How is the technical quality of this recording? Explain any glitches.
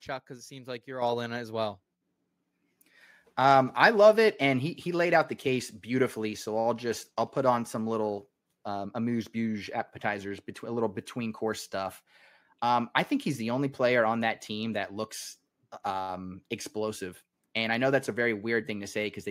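The recording has one glitch. At 1.02 s, between "it seems like you're" and "all in it as", the microphone volume stepped up: the call software raised the input level by about 7 dB in one jump, so voice and background suddenly get louder together.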